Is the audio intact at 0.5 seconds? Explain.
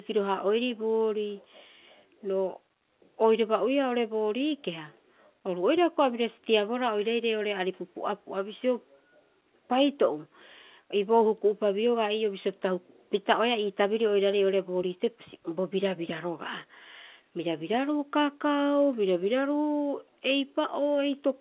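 Yes, the speech at 0.5 seconds is intact, with the mu-law G.711 telephone coding behaving as expected and nothing above 4 kHz coming through.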